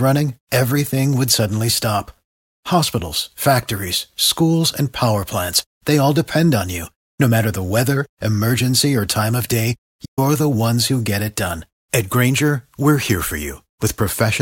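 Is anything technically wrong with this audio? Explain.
Yes. There is a playback stall at 10.05 s, ending at 10.19 s. The speech cuts off abruptly in mid-flow, and the output falls silent for 120 ms before the sound resumes. The likely cause is the player running out of data, or its playback thread being blocked, so nothing reached the output until it recovered. The gap is brief but clearly audible. It breaks into the flow of speech instead of falling at a natural pause.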